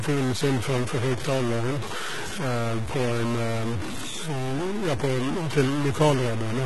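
A speech clip with two faults running throughout. Noise and distortion ride on the signal, and the pauses fill with noise. That is likely a stuck bit in the data path. The treble is rebuilt rather than real, with heavy codec damage and nothing above 11.8 kHz. This points to HE-AAC compression, with a sound that fits a bitrate near 16 kbps.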